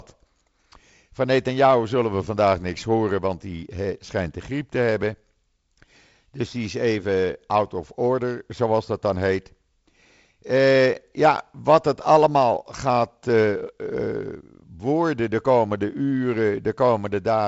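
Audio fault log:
Nothing to log here, since the speech just comes over G.722 wideband telephone coding at 48 kbit/s, with nothing above 7.7 kHz and the light coding grain you'd expect from that setting.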